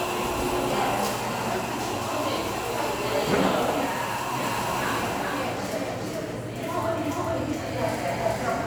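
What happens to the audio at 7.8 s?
At 7.8 s the audio is inside a doubled audio track that begins abruptly at 4.43 s and runs to the end. A second full-band copy trails the original by roughly 0.4 s at about the same loudness, likely because the sound was picked up again through a slower path. Unlike an echo or reverb, this repeat comes once, with no decay or room colour.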